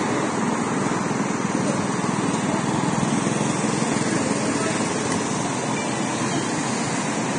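An everyday sound recording that was most likely squeezed through low-bitrate Vorbis compression, with the heavy damage that fits a rate of around 26 kbps. The encoder discards everything above 9.7 kHz for the whole clip, so the top end is missing, and the treble left below that cut-off is quantised so coarsely that its fine detail turns into hissy, grainy noise. Tonal parts sound roughened and sharp attacks are smeared throughout.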